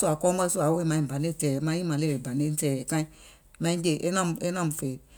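No technical faults are audible.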